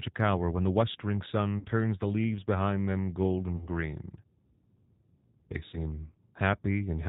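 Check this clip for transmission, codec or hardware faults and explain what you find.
The speech has two faults: a steady codec character and three short dropouts.

Throughout, it sounds band-limited, slightly rough and synthetic. That fits the G.729 codec at 8 kbit/s, which rebuilds speech from a filter and sparse pulses.

At 1.59 to 1.67 s, 3.57 to 3.69 s and 5.69 to 5.77 s, the sound smears into a buzzy tone or coloured noise that fades. This is VoIP packet loss concealed by the speech codec, which extrapolates the last frame.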